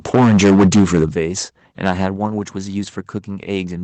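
From 0.14 to 1.05 s the speech is harsh and crackly. This is microphone overload, likely from input gain set about 13 dB too high, so roughly a fifth of the waveform has its peaks flattened at the converter's limit. It sounds gritty only on the loud peaks. A second, milder overload from 1.85 to 2.06 s, about 4 dB over, clips only a small fraction of peaks and adds a brief rasp.

The microphone volume is stepped down at 0.15 s by about 2 dB, at 1.14 s by about 9 dB, at 2.16 s by about 4 dB and at 3.18 s by about 2 dB. Each step is likely the call software's automatic gain reacting to the loud peaks. Voice and background drop together at once, with no fade, which tells it apart from a speaker moving away.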